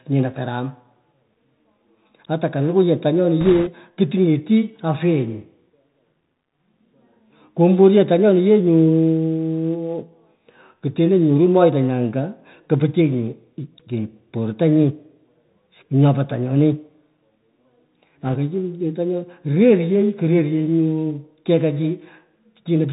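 Throughout, the speech carries the Bluetooth CVSD headset codec. Nothing passes above 4 kHz, s sounds turn scratchy, and a granular hiss lies underneath. This fits a 64 kbps one-bit delta link whose adapting step cannot keep up with loud high-frequency sound. It differs from a generic low-bitrate codec because the damage is grain and overload distortion rather than warbling or smearing.

From 3.41 to 3.72 s, just before "kuting'eti afyenyi", bit errors on a Bluetooth voice link add a rushing, crackly noise over the speech, at an error rate of a few percent. A lighter burst follows from 18.26 to 18.36 s at around one percent. Each flipped bit only nudges the delta step, and its effect dies away. That is why there are no sharp clicks or gaps, unlike PCM bit errors or dropouts.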